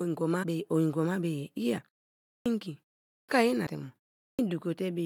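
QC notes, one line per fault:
0.42–0.44 s, 1.77–1.79 s, 3.66 s, compressed frames skipped: the audio jumps ahead by about a tenth of a second, then a sliver, then roughly half that.
2.34–2.46 s, 3.16–3.29 s, 4.26–4.39 s, clipped start after a pause: after gaps of 0.53, 0.4 and 0.35 s, the first 117, 126 and 130 ms vanish while the output wakes, so speech pops in abruptly.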